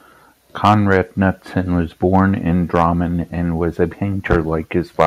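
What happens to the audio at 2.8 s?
From 2.77 to 2.82 s the peaks clip, flattening their tops and adding a brief harsh, crackling edge. This is likely microphone overload: the input level drives the peaks about 2 dB past the converter's ceiling, so a small fraction of samples are cut off.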